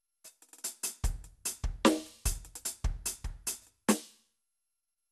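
Across the whole of the music there is generation loss: a swirly, hollow smear over the sound, with transients softened into blur and nothing above about 12.6 kHz. The cause is likely repeated lossy coding, which fits MP2 at 128 kbit/s applied around seven times. Each pass requantised on a shifted frame grid, so noise piled up. One encode at that bitrate would sound far cleaner, so the build-up points to many passes rather than a low bitrate.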